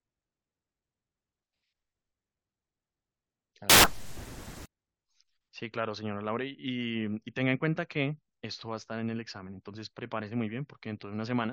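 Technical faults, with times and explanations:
3.70–4.66 s, samples built from the wrong bytes: the reader assembled each sample from misaligned or swapped bytes, so the rapidly changing low-order bits landed in the most significant position. For just under a second the speech is replaced by loud, harsh broadband noise, close to white on the louder sounds.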